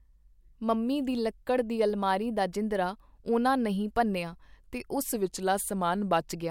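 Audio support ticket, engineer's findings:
Speech slows and drops about a semitone (−112 cents, −6.3% speed), 5.14–6.21 s, then snaps back. Drift correction step, likely in clock-matching resampler: playback rate lowered in one jump to rebalance buffer, then restored.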